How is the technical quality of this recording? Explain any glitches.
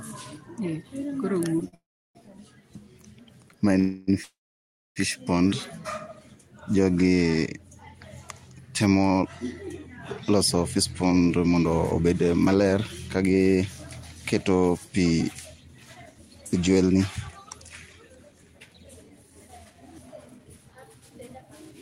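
The recording has several network-related glitches: one brief stall, three freezes in the first five seconds, and two long stretches where the audio runs fast.

A short stall from a late packet occurs at 1.68 s. A packet missed its playout time and the jitter buffer ran dry, so the receiver stretched the last sound by about 45 ms. The result is a held sound with a faint buzz or dip, but nothing is lost.

A call audio freeze follows at 1.75–2.17 s, with more at 3.79–4.10 s and 4.23–4.98 s. These were likely caused by packets held up in transit, which emptied the buffer again. The last sound decays into a fading buzz or hiss, then silence for about 0.34 s in the first freeze and 0.63 s in the third. The audio resumes where it stopped.

A jitter buffer speed-up runs at 10.30–13.54 s and 14.36–21.72 s. The built-up backlog was cleared by snipping out tiny pitch-period slices again and again, removing roughly 0.3 s and 0.7 s. 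The speech plays about 9–10% fast at unchanged pitch and sounds hurried.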